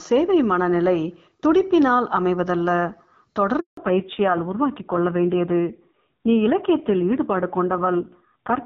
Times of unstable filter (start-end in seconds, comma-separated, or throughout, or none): none